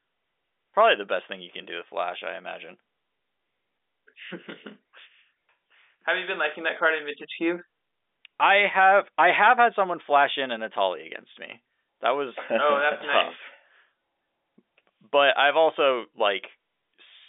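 Nothing is technically wrong with this speech recording, which comes through a standard telephone line band.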